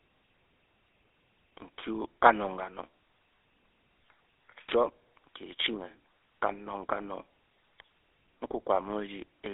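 A buzzy, gravelly roughness runs through the whole of this speech recording, with a thin, boxed-in tone: the low end thins out below about 300 Hz, the top stops near 3.7 kHz, and nothing reaches past 3.8 kHz. That is the GSM full-rate codec, which rebuilds the voice from a vocal-tract model fed by coarse, regularly spaced pulses, fitting its 13 kbps mode; the damage is plainly audible.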